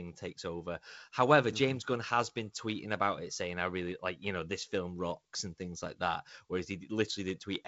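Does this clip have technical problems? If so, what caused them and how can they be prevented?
No, no technical faults here.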